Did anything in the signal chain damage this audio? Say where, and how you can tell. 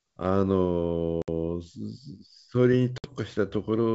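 Yes: network packet loss on an ADPCM call. Hard-edged silent holes at 1.22–1.28 s and 2.98–3.12 s show as blank waveform and spectrogram gaps, then a slightly distorted restart while the decoder's predictor resyncs.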